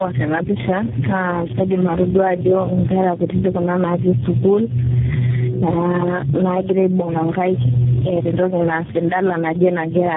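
Gain pumping runs through the whole speech clip: the gain swings by around 10 dB, pulling loud and soft parts closer in level and leaving the sound squashed, likely from a fast limiter acting on an overdriven microphone. Tandem speech coding is also present throughout, leaving the sound rough, muffled and warbly with nothing above 3.8 kHz, which fits the call being decoded and re-encoded through four speech codecs in a row, each one degrading the last one's output.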